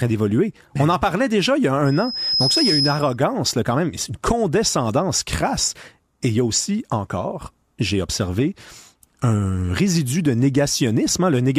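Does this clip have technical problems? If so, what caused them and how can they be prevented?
Yes. From 1.85 s to 3.17 s there is loudspeaker feedback squeal: a 5.1 kHz tone that swells over roughly half a second until it is about as loud as the speech. The microphone is picking up the loudspeaker it drives, and at 5.1 kHz the loop gain has gone above one, so that frequency keeps reinforcing itself. Prevent it by lowering monitor gain, moving the microphone out of the speaker's coverage, or notching 5.1 kHz.

At 6.52 to 6.58 s there is a brief patch of DAB burbling over the speech. Weak reception let a small fraction of bit errors slip past the error correction into the MP2 data; corrupted samples put short blips of noise into single sub-bands. The spread of the damage fits eight frames being hit. Prevent it with a better-placed or higher-gain antenna, or by recording from a stronger multiplex.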